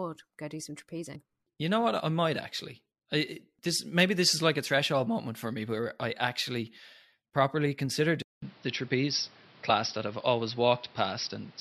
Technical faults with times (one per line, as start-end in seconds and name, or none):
8.22-11.60 input switched to a poorer device